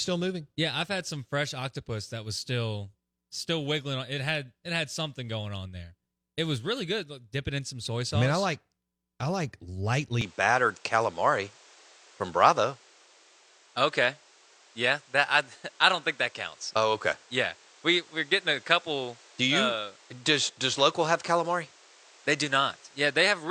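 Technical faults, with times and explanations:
10.21 to 23.51 s, input switched to a poorer device: the speech abruptly loses everything above 9.2 kHz, shifts level by a few decibels and gains a new background noise roughly 30 dB down, with no gap. That combined step of band, level and noise likely marks a changed microphone rather than a codec narrowing.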